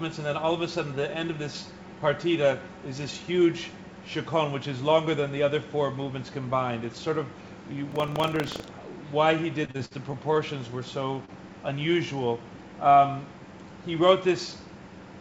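The audio, carried over a wideband call path, has a buzzing rattle at 25 Hz from 7.88 to 8.72 s. This is buffer tearing: writer and reader slipped, so a small share of each 40 ms buffer replays audio from about 150 ms earlier, with hard joins. From 9.65 to 10.38 s the sound turns choppy and robotic, with pieces missing. This is repeated packet loss across six gaps, the longest 53 ms. About 164 ms was patched by continuing the last sound, roughly 22% of that stretch. At 11.25 to 11.31 s a brief smear marks short concealed packet loss, where 30 ms never arrived and 24 ms was filled before blending back.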